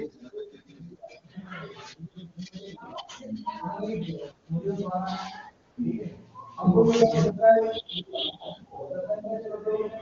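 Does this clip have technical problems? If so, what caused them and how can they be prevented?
Yes. AMR comfort noise appears from 5.71 to 5.77 s, a 60 ms stretch where the phone's voice activity detector decided the talker had gone quiet and sent no speech frames. The receiver filled the gap with smooth synthetic noise built from a rough estimate of the background's level and spectrum, so the real ambience briefly gives way to a steady hiss. The surrounding wideband speech sounds clear. To prevent it, disable discontinuous transmission or make the detector less aggressive.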